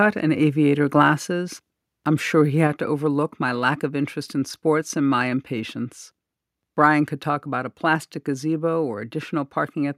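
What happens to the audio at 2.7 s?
At 2.67 s the whole signal, voice and background alike, drops by about 3 dB in a single step and stays at the lower level: a microphone volume stepped down. The likely cause is the call software judging the input too hot and cutting the device's input volume at once. On a waveform the envelope shrinks abruptly at that instant; on a spectrogram every band dims together, including the noise floor between phrases.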